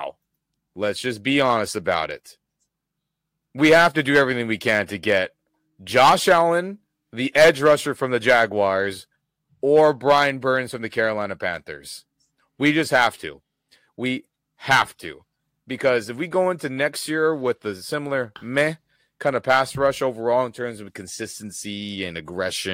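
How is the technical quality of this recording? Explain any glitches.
The recording has one problem: hard clipping on the speech throughout. The level runs about 9 dB past what a stage in the chain could pass, so the loudest peaks, under one percent of samples, are sliced flat. This is heard as crackle on emphatic syllables. On a waveform, peaks sit squared off, and a spectrogram shows vertical smears of added high harmonics at each loud moment.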